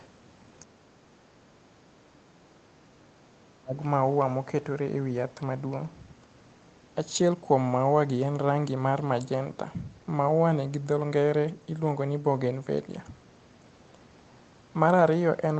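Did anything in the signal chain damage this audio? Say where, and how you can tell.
Yes. The fault is in call processing. From 0.0 to 0.07 s, a faint second voice sits about 30 dB under the speech. That is the other side's voice leaking through. The canceller likely left residual loudspeaker echo in the microphone signal.

Call processing fails again from 1.68 to 3.8 s. The talker's speech dips, falling by roughly 30 dB at worst, for about two seconds in all. This is speech suppressed in double talk. The canceller likely turned both voices down because it couldn't separate them.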